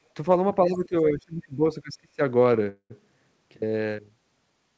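A speech recording over a G.722 call path, band-limited to nothing above 8 kHz, shows two faults. From 0.67 to 2.21 s the voice is speech suppressed in double talk, dipping by as much as about 25 dB for roughly a second in total. The likely cause is an echo canceller mistaking the talker for echo. Unlike a dropout, the level is ducked in pieces rather than switched cleanly off. At 2.69 to 2.92 s a call audio freeze stretches the last sound into a fading buzz or hiss over 211 ms, including 70 ms of silence, then resumes where it stopped. This likely comes from a starved jitter buffer. Unlike packet loss, nothing is missing; the timing is just pushed 211 ms later.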